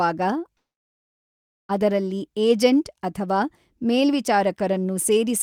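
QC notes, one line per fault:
0.57–1.71 s, call audio freeze: the sound stops and the last fragment trails off briefly into about 1.1 s of silence. It then resumes exactly where it broke off, with nothing lost, so everything after arrives 1.1 s late. Likely an emptied jitter buffer during a packet delay.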